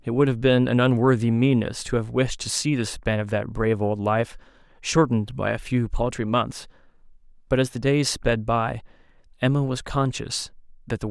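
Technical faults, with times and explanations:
No technical faults can be heard in this speech recording. There is nothing here that calls for a time or an explanation.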